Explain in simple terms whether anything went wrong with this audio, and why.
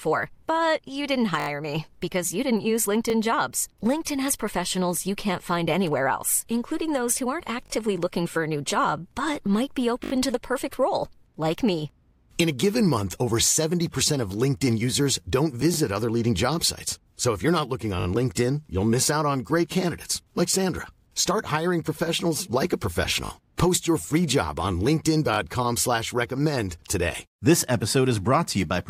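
The speech has repeated buffer faults: a tiny slice of sound plays two or more times in a row, like a quick stutter, at 1.4 s (just before "me because you"), 3.1 s, 7.66 s, 10.04 s, 18.0 s and 25.34 s. New audio arrived late, so the player replayed its last chunk, which sounds like a 20 ms buffer.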